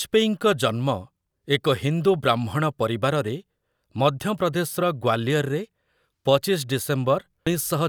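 At 7.47 s, a brief glitch cuts into the speech. This is damaged data in a compressed stream: the decoder lost sync on corrupted frames, then searched for the next frame header.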